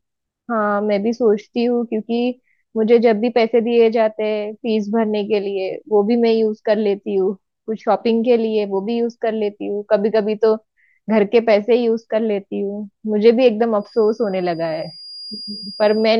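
A speech recording with a feedback whistle from 13.77 s to the end at 16.19 s: a thin, steady 4.8 kHz tone sits around 20 dB below the voice, swelling and fading slowly in level, likely from a loudspeaker-to-microphone loop held just short of runaway feedback.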